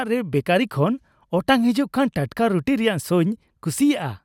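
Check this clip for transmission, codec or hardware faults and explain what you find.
No faults can be heard anywhere in this speech recording. Nothing in it calls for an explanation.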